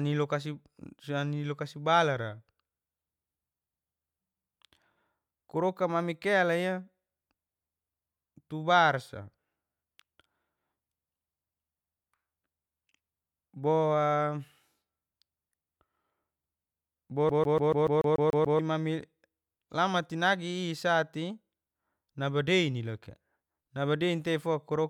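Around 17.29 s the speech gets a CD stuck on one turn: a 144 ms slice repeats nine times with tiny mutes, an even stutter until 18.59 s.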